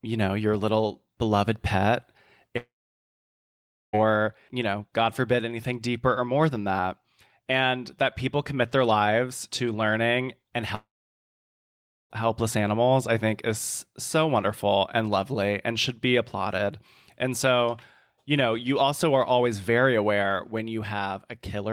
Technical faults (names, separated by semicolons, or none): long network dropout